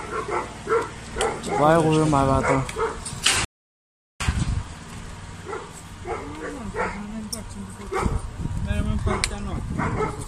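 At 3.45 s the sound cuts out in mid-flow and stays silent until 4.20 s. That gap of 0.76 s is a playback stall. The player likely ran short of data or its thread was blocked. Output then resumes.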